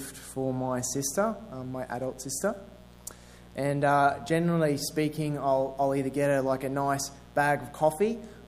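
Mains buzz runs from start to finish, sitting roughly 25 dB below the sound itself. Its fundamental is 60 Hz, which fits North American power. Sharp switching spikes from something like a dimmer or rectifier, or a poorly shielded cable, leak into the signal path twice per mains cycle. Those spikes carry a dense stack of 60 Hz harmonics that reach well into the kilohertz range, so what you hear is a steady, raspy buzz rather than a smooth hum.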